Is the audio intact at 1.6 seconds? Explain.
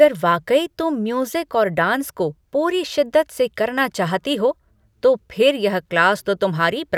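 Yes, at 1.6 seconds the speech is intact, with no dropout, click, distortion or other fault present at that moment.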